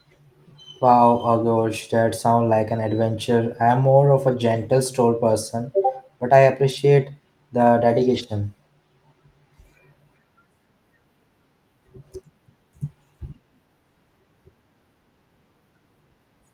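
No technical faults are audible in this recording.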